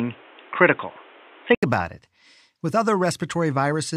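From the start to 1.63 s the speech sounds dull and boxy, with nothing above 3.8 kHz, a level shift of a few decibels and its own background noise about 30 dB below the speech. An 80 ms silence precedes "about it". This points to the input likely switched to a poorer device.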